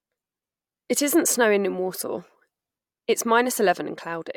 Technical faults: none

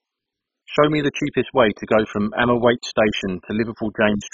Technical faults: MP2 compression

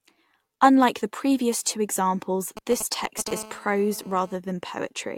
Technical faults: GSM signalling bursts; GSM phone buzz

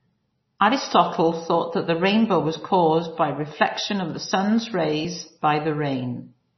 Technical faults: MP3 compression

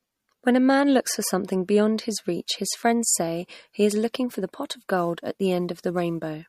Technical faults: MP3 compression; sample clock jitter

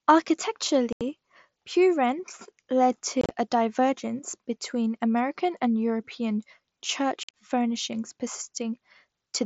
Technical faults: unconcealed Bluetooth headset packet loss

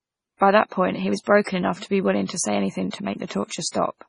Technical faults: low-bitrate audio saved at a high bitrate

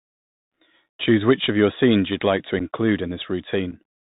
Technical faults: Bluetooth CVSD headset codec; unconcealed Bluetooth headset packet loss

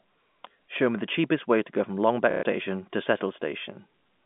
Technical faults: packet loss with last packet repeated

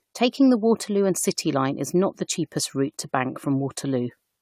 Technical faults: generation loss

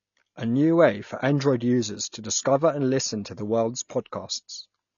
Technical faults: AAC compression; pre-echo

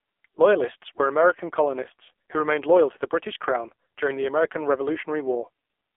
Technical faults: AMR narrowband mobile codec

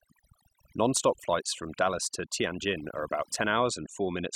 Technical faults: overdone noise removal

